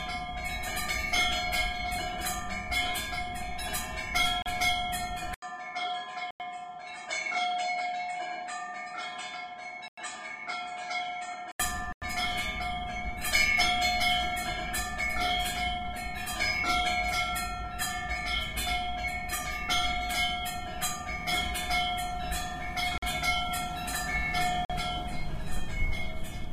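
At 4.42 s the sound drops out for 36 ms. This is a block of digital silence. The sound cuts straight to silence and back. It is heard as a short hole.

At 5.34 s there is a gap of 80 ms. Then the sound turns dull and slightly quieter. Nothing remains above 8.6 kHz. A faint new noise sits well below the sound. The likely cause is the input switching to a poorer device. The full band returns at 11.60 s.

Further dropouts fall at 6.31, 9.88 and 11.93 s. Each lasts about 93 ms, which fits a 4096-sample buffer left unfilled. Two shorter ones follow at 22.98 and 24.65 s, about 46 ms each. That fits a 2048-sample buffer. All of them cut in and out abruptly.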